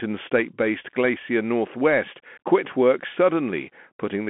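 Bluetooth CVSD headset codec throughout: one-bit delta coding, consistent with a 64 kbps stream, removes everything above 3.8 kHz, leaving scratchy sibilants and granular hiss.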